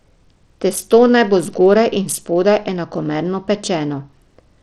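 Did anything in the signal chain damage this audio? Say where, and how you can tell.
Yes, and it's at the codec stage, running through the whole speech clip rather than at any one moment. The top end keeps thinning out and flickering, and there's a gritty, grainy haze sitting on the speech throughout, plainly audible. That's likely Bluetooth SBC compression starved for bits, which fits a low rate around 80 kbps: the weak upper sub-bands get almost nothing, the rest are quantised coarsely, and the grit plus aliasing is what comes out.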